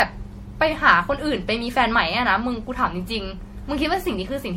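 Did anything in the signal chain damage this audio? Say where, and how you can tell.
Yes, at the codec stage, throughout the speech. It sounds swirly and hollow, with blurred consonant attacks, likely from generation loss: about seven MP3 passes at around 64 kbit/s, each re-quantising on a shifted frame grid. A spectrogram shows nothing above 16.4 kHz, scattered holes and smeared onsets.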